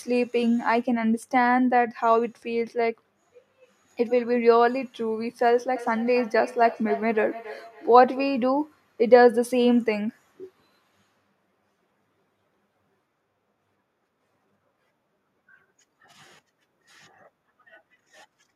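From 5.76 to 8.38 s the speech picks up feedback echo between two devices. A second device in the same room plays this signal back, its microphone catches it again, and neither echo canceller removes the other's playback. Each word returns at a fixed gap of roughly 0.3 s, at most about 16 dB below the speech, growing thinner and more ringing. That regular repeat interval separates it from room reverberation, which smears continuously instead.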